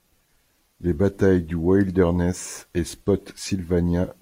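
No technical faults can be heard anywhere in the recording.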